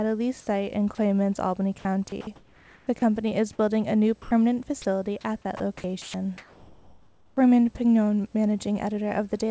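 Right at the start, at 0.41 to 0.47 s and again at 0.95 to 0.98 s, you get short holes where the sound gives way to a flat, steady hiss for 60 ms and then 30 ms. That's sound dropped by the voice detector. The sender most likely judged those bits to be background, stopped transmitting, and the far end slotted in comfort noise. It's brief.

From 1.79 to 3.02 s it gets rougher. This is sound chopped by the voice detector: the detector keeps flipping between sending and muting, so about 0.69 s of that stretch turns into synthetic noise. The result is choppy, most likely because quiet edges of the sound kept falling under the detector's threshold.

The same dropping happens twice more, at 4.22 to 4.31 s, with about 90 ms replaced, and at 4.82 to 4.85 s, with 30 ms replaced. Each is a short gap filled with flat noise before the sound snaps back.

Then from 5.57 to 7.37 s there's another long chopped stretch, with 1.2 s of it swapped for comfort noise. 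It sounds gappy and stuttering. All of this sits on a G.722 call path with nothing above 8 kHz, so the top end is dull throughout.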